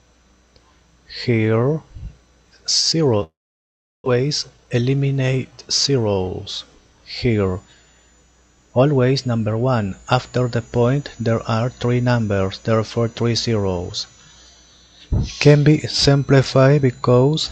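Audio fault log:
3.23 to 4.08 s, long network dropout: the sound breaks off and is carried on briefly as a fading buzz that decays into silence for about 0.71 s of the gap. When it resumes around 4.08 s, roughly 0.6 s of material just isn't there; it jumps ahead rather than picking up where it stopped. That stall-then-skip shape is most likely a run of packets failing to arrive, with the receiver stretching the last bit it had before giving up.
4.16 to 5.97 s, jitter buffer speed-up: right after the gap the audio runs about 11 percent fast for nearly two seconds, yet the pitch stays put, so it just sounds hurried. Once the delayed audio finally showed up, the receiver had a backlog, something like a fifth of a second, and worked it off by snipping out tiny pitch-period chunks over and over until the delay was back down.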